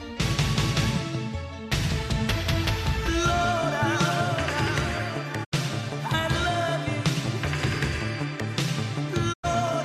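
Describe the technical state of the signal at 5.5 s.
At 5.5 s the signal is in a digital broadcast dropout, from 5.43 to 5.54 s. The receiver stopped getting valid frames and muted, so the sound fades out over about 20 ms, leaving roughly 72 ms of missing audio before it returns.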